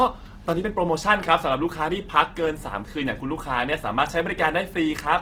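Throughout, the speech sounds grainy and rough, noisy rather than swirling as MP3 would; likely Opus compression in music mode, fitting a bitrate near 16 kbps.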